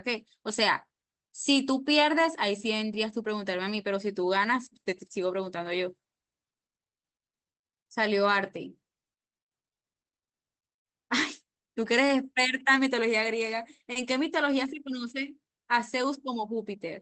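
Clock drift between sender and receiver runs through the whole speech clip: the sender's clock is roughly 2% slow, so the receiver's jitter buffer keeps draining and needs topping up. From 0.87 s to 13.13 s this appears as repeated timing corrections: the speech plays at 98% speed, stretched by small repeated pieces that add about a fifth of a second in total. It sounds like a slightly unsteady, dragging tempo, and on a waveform syllables look faintly elongated at uneven points. From 13.92 s to 13.98 s there is a short stall from a late packet. The buffer ran empty and the last sound was held for 30 ms before playback resumed with nothing lost. It is heard as a brief held sound with a slight buzz or dip, and on a spectrogram it appears as flat, horizontally smeared harmonics. Throughout, the Opus call path leaves a clean spectral ceiling at 8 kHz.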